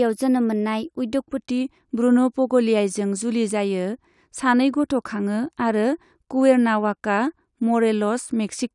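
From the start to 1.38 s, the speech suffers a wrong sample rate: the samples are clocked out faster than they were captured, with no rate conversion in between. The 1.09 speed-up with a pitch rise of 1.47 semitones fits audio made at 22 kHz being played at 24 kHz. Because speed and pitch move together by that one ratio, the voice sounds slightly high and hurried until 1.38 s.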